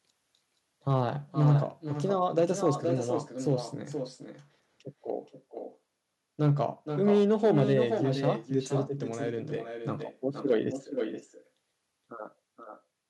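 Throughout the speech, echo with no canceller is present: the far end's loudspeaker output is re-captured by its microphone and returned unremoved, so each phrase is trailed about half a second later by a thinner copy roughly 8 dB quieter.

Hard clipping occurs at 0.88–1.55 s, 2.15–2.70 s, 3.49–3.52 s, 6.42–6.60 s, 7.05–7.79 s, 8.25–8.29 s and 10.50–10.56 s. A stage overloaded by about 1 to 5 dB flattens the peaks, adding high harmonics heard as crackle.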